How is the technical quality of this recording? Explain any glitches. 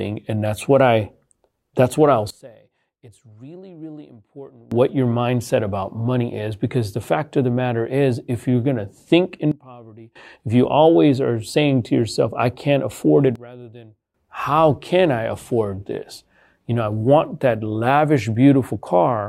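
The recording has a recurring sudden gain jump: three times the level drops abruptly and then snaps back. The likely cause is a digital gain setting switched from one sample to the next with no ramp, which scales everything at once. The speech and the background noise fall together, then return abruptly. This happens from 2.30 to 4.72 s (about 23 dB down, after "that's what I'll", recovering before "your mindset about money"), 9.52 to 10.16 s (about 21 dB, after "going to think", back by "if you always are"), and 13.36 to 14.14 s (about 19 dB, after "I can't afford it", back by "how can I afford").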